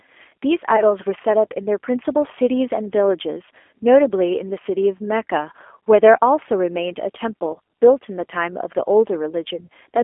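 From the start, the whole clip carries G.729 codec damage, and it is plainly audible. The speech sits in a narrow phone band, roughly 300 Hz to 3.4 kHz. The thin, boxy sound and slightly rough, synthetic texture fit an 8 kbit/s codec. It rebuilds speech from a filter, a pitch predictor and a few pulses per frame. Fine detail is lost, and nothing bright survives.

At 0.76 to 0.84 s there is VoIP packet loss concealed by the speech codec. The gap points to about 20 ms of missing audio, likely a single lost packet. The decoder stretches its last pitch and filter into a brief buzzy tone or coloured noise, then fades it. Afterwards the voice stays weak or distorted for tens of milliseconds or more. The same fault recurs at 5.30 s as a very short glitch, and again at 7.54 to 7.57 s.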